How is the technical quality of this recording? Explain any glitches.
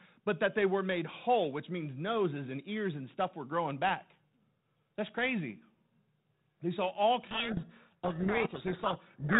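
The recording runs through G.726 ADPCM at 32 kbit/s, so it is band-limited below 4 kHz with light coding noise, and it breaks down badly in the final seconds.

Codec payload misread, from 7.22 s to the end at about 9.4 s: the decoder starts unpacking each G.726 code word with its bits in the wrong order. The values it reconstructs are valid but wrong, and the adaptive predictor follows them off course. The speech ends up buried under harsh, grinding distortion that lasts to the end of the clip.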